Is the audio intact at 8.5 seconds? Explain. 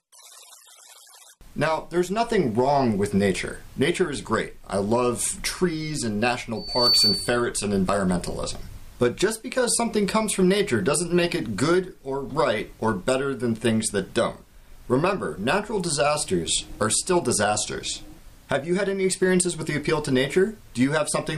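Yes, the audio is intact at 8.5 seconds, with no dropout, distortion or other fault at that moment.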